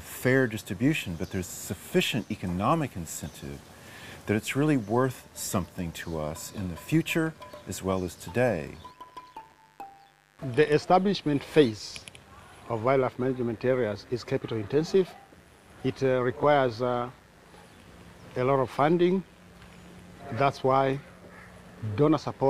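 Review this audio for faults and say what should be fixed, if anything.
Mains buzz runs throughout, a steady raspy buzz sitting roughly 35 dB below the sound. Sharp switching spikes from a dimmer, rectifier or unshielded cable arrive twice per 50 Hz cycle, spraying harmonics up into the kilohertz range. Move the recording chain away from dimmers and switching supplies, use balanced shielded cabling, and break any ground loop.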